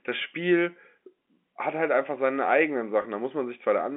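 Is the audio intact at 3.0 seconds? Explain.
No. Packet loss with pitch repetition occurs from 3.02 to 3.04 s, just after "halt einfach seine eigenen". About 20 ms of audio failed to arrive, which fits a single lost packet. The receiver filled the hole by repeating the last pitch period of the speech and tapering it away. Because the gap is so short, it comes across as a brief, slightly held, buzzy stretch rather than a dropout to silence.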